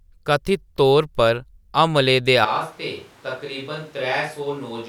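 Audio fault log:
2.45 s to end, switch to a distant microphone: right after "तौर पर हमलें दे" the speech turns suddenly roomy and hollow, thinner in the bass and about 10 dB quieter, and it stays that way to the end. Background noise comes up to roughly 25 dB below the speech. The abrupt change in tone, level and room sound is consistent with the close microphone dropping out and a farther pickup, likely a camera or room mic, carrying the remainder.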